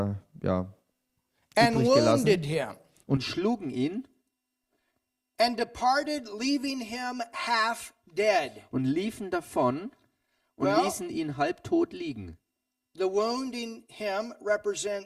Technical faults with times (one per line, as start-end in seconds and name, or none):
3.17-15.06 channel delay (comb filtering)